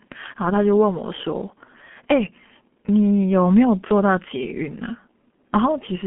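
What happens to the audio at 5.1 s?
At 5.1 s the speech sounds muffled and hoarse, with smeared consonants, as it does across the whole clip. This is G.723.1 codec damage. Nothing reaches above about 3.7 kHz, and coarse 30 ms frames blur detail, which fits a rate near 6 kbit/s.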